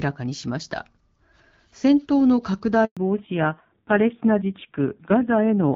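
At 2.85 s the speech cuts out in a handover gap lasting 120 ms, until 2.97 s. The sound fades within a few tens of milliseconds and then leaves dead silence, which is what happens when the call is passed between networks and no speech frames get through during the switch. Whatever was said in that window is gone.

From 2.97 s to the end, the call has a fallback to narrowband. Before the gap the speech is carried by the AMR wideband (HD Voice) codec, with content reaching toward 7 kHz and only light coding damage, consistent with a mid-range rate around 12.65 kbit/s. After the gap nothing remains above 4 kHz, so sibilants and breathiness lose their top end and the voice turns dull and muffled. The added roughness points to AMR-NB running at a low rate, about 5.9 kbit/s.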